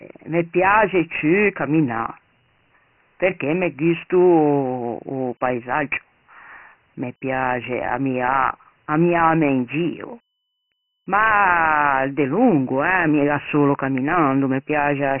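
Speech, and it's Dialogic VOX ADPCM the whole way through. Nothing comes through above 3 kHz, which fits a 6,000-samples-a-second, 4-bit VOX file. The coarse 4-bit adaptive steps leave a heavy, gritty hiss riding along with the speech.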